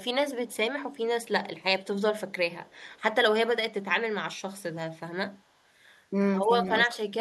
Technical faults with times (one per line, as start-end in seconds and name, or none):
0.48-0.57 echo leak
2.65-3.00 echo leak
3.62-3.66 speech suppressed in double talk